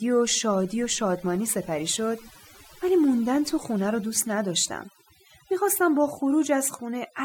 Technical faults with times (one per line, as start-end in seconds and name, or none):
0.00-7.24 overdone noise removal